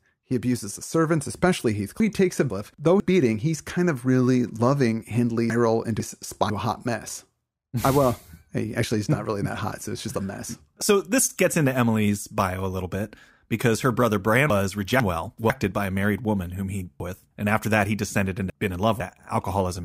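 Chunks out of order garble the speech at 2.0–3.0 s, 5.5–6.5 s and 14.5–15.5 s, where one half-second chunk plays a chunk late, and at 17.0–19.0 s, where it lands three chunks late. Each swap leaves hard joins, but unlike a dropout or repeat, nothing goes missing or sounds twice.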